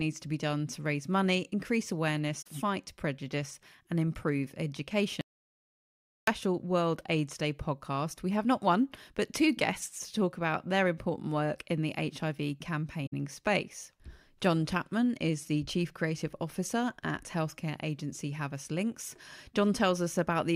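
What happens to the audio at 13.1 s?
AAC frame loss with muting occurs from 13.06 to 13.14 s. A run of encoded frames failed to reach the decoder, which filled the gap by zeroing their spectral content. About 64 ms of audio is missing, which fits three lost frames. Because the decoder's overlapping windows taper the neighbouring frames, the speech fades out into silence and fades back in, leaving a brief dropout with soft edges rather than an abrupt cut.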